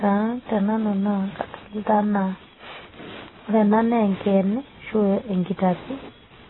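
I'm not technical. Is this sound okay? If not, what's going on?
No, the speech sounds dull and muffled all the way through, with a watery, warbly edge on the s sounds. That's likely heavy AAC compression: to shrink the file, the encoder threw away everything above about 4 kHz and smeared what remained.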